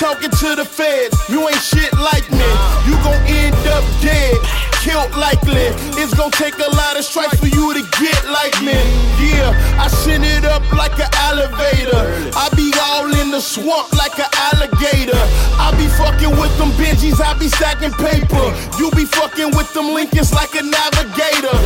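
No technical faults are audible anywhere in the audio.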